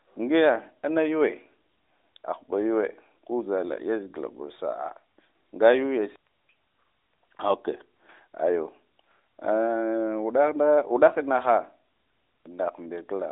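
Speech over an AMR narrowband mobile codec link, band-limited to the telephone range of about 300 Hz to 3.7 kHz with nothing above roughly 3.8 kHz, and no technical faults to report.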